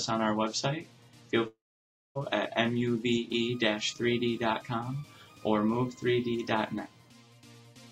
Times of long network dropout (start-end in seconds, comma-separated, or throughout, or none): 1.47-2.17